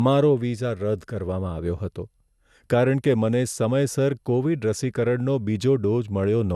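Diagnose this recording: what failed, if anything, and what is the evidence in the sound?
The problem sits in the codec stage and runs through the whole clip. The speech has a swirly, hollow, smeared quality, consonant attacks come out soft and blurred, and there's nothing above 12.6 kHz. That points to generation loss, likely from being encoded and decoded about five times with a lossy codec, which fits MP2 at 128 kbit/s. Each pass quantises on a shifted frame grid, so noise and spectral holes stack up beyond what one encode would do.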